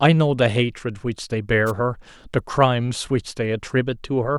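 At 1.66 s a wireless microphone noise hit lasts about 56 ms: the FM radio link fades as reflected signals cancel, so receiver noise surges over the speech as a brief swish of static. Unlike a digital dropout, which leaves silence or a repeated fragment, it adds hiss.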